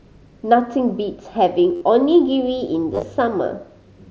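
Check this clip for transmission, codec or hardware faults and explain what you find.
Two faults of the same kind are present, both concealed Bluetooth headset packet loss, heard over the light grain and 8 kHz ceiling of the mSBC headset link.

At 1.75 to 1.81 s, about 60 ms of audio is missing as one run. The receiver fills the gap by repeating the closest-matching recent waveform stretch, producing a brief buzzy, steady-level tone with a slight warble as real audio resumes. At 2.94 to 3.03 s, a similar 60 ms loss is scattered across 90 ms, with no run longer than 15 ms, so the patching is largely hidden rather than heard as a held tone.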